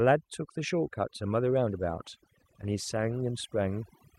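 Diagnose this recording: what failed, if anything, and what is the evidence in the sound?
Overdone noise removal, in call processing, runs the whole way through. The background sits at near silence with twinkling specks.

Call bitrate drop, at the network and codec stage, from 1.68 to 2.97 s. The speech turns rough and muffled, which fits Opus falling from about 48 to 15 kbps before recovering.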